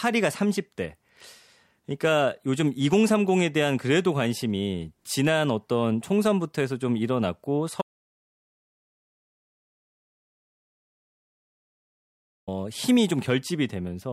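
At 7.82 s the speech cuts off mid-flow and the clip falls to digital silence, with no room tone or noise floor, until the speech resumes abruptly at 12.48 s. This is an audio dropout to silence lasting about 4.66 s. The input signal was likely lost, through a disconnected device, a failed link or an accidental mute, while recording continued and wrote silence. Whatever was said during the gap is unrecoverable.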